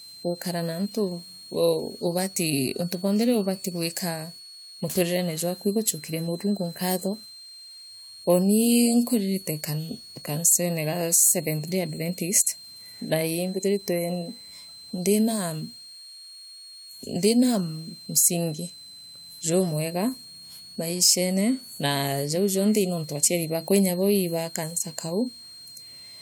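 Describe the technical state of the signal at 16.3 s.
At 16.3 s the speech carries a switching supply whistle, present across the whole clip rather than only at this moment. A nearby power supply cycling in an audible burst mode puts a thin high tone into the signal, sitting around 4 kHz and roughly 20 dB below the speech. Unlike mains hum, it is far above the low harmonic region, and unlike a fixed test tone, its pitch wanders between about 4.07 and 4.41 kHz.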